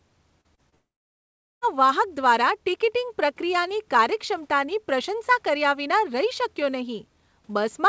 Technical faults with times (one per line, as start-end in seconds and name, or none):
0.41-0.75 short concealed packet loss
0.75-1.64 long network dropout